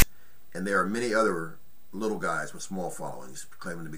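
At the very start, from 0.00 to 0.02 s, a block of text metadata at the head of the file is decoded as though it were sample data, the fault known as file tags played as audio. Because the bytes are characters rather than a waveform, they become a loud, buzzy rasp pushed off to one side, lasting only about 23 ms. It cuts in and out with hard edges, a brief burst of static before the real audio begins.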